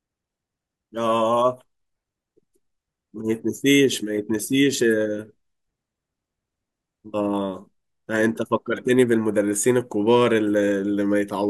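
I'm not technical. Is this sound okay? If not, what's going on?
Yes, this sound is okay, and there's nothing going on with it that needs fixing.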